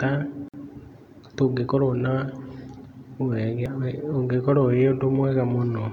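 At 0.48 s the speech drops into a gap at a join of encoded pieces, lasting about 52 ms until 0.54 s. Separately encoded segments were joined untrimmed, leaving encoder delay and end padding in place. The silence has smeared edges before the speech resumes where it stopped.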